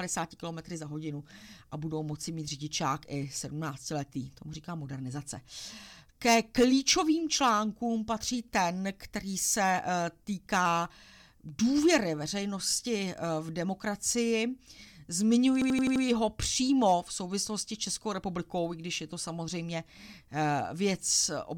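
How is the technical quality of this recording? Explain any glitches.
There's one clear glitch, a system hang loop from 15.62 to 16.04 s. The playback machine or its driver briefly froze while the audio hardware kept cycling through the same ring buffer. One 85.33 ms chunk plays 5 times back to back, about 11.7 repeats per second. That chunk length points to a 4096-sample buffer. At that length it comes across as a rapid machine-gun stutter rather than a buzz. When it recovers, the speech picks up with essentially nothing missing.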